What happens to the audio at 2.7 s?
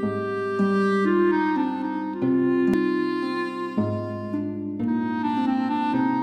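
A CD skip at 2.73 s: the laser pickup lost its place on the disc's spiral track and landed on another turn. The music drops out for a few milliseconds with a small tick, then resumes from a different point in the recording.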